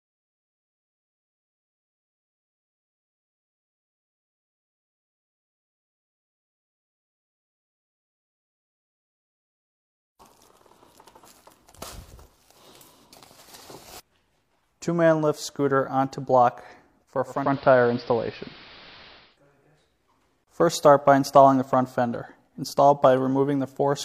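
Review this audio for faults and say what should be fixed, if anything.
From 17.26 s to 19.39 s there is digital radio blending to analogue. The receiver lost its digital stream and cross-faded to the AM broadcast of the same station, then faded back. Each blend takes about 0.35 s. During the AM stretch the level shifts by about 3 dB. Hiss appears roughly 25 dB below the signal. AM's narrow bandwidth also limits the top end there. Record from a stream or improve reception, and lock the receiver to digital-only mode.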